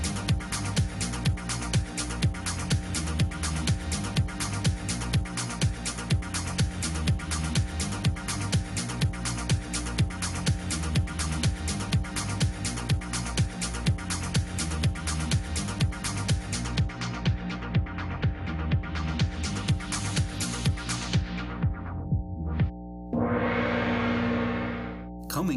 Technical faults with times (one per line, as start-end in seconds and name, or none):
0.00-25.56 mains hum